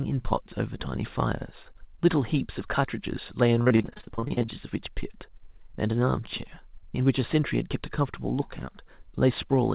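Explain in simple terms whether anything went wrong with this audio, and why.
Between 3.62 and 4.50 s, repeated packet loss makes the speech choppy and robotic: about twenty short dropouts, each patched by stretching the sound just before it.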